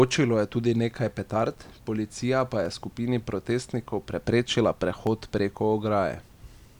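Three single sharp clicks cut through the speech, at 2.66 s just before "je skupini protestnikov preprečila", at 5.07 s just after "je skupini protestnikov preprečila", and at 6.14 s. Each is likely dropped samples: a fraction of a millisecond lost, making the waveform jump abruptly.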